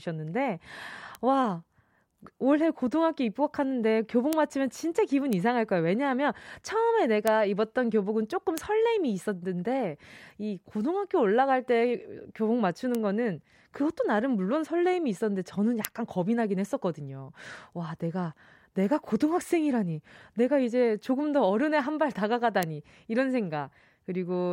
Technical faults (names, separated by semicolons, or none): bit error spike